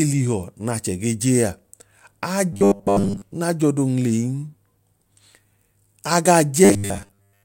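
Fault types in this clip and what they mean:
Robotic sound from repeated short buffers: ending before "naa j'ọdo" and again at the close, speech becomes a rigid metallic buzz at 100 Hz, likely a 10 ms slice looped while most audio is skipped; spectrograms show even 100 Hz harmonic stripes, waveforms a repeating cycle.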